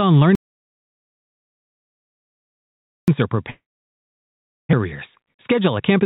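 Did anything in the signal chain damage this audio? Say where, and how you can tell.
Yes. From 0.35 s to 3.08 s the speech stops dead into silence, with no room tone at all, and about 2.73 s is simply gone. This is an audio dropout to silence at the input stage, likely a lost device or link while the recorder kept writing silence.

From 3.5 s to 4.75 s there is a long network dropout. The last sound is stretched into a fading buzz, then silence remains for most of that stretch, and about 960 ms of speech never arrives. The receiver's concealment likely covered the gap, and the delay shifted by roughly 200 ms.

From 4.85 s to 6.0 s the speech runs hurried at about 110% speed with unchanged pitch. This is a jitter buffer speed-up: the receiver trimmed short pitch-period pieces repeatedly, around 150 ms in total, to drain excess buffered delay. The G.711 call path keeps nothing above 4 kHz throughout.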